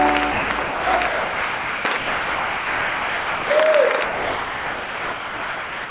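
Sound dropped by the voice detector: at 0.32–0.5, 0.62–0.86, 1.07–1.85, 1.97–3.5 s and from 4.04 s to the end, the audio gives way to steady comfort noise, likely because the sender's detector judged it background. Unlike packet loss, each gap is smooth hiss, not clicks or stutters, over audio already band-limited to 4 kHz.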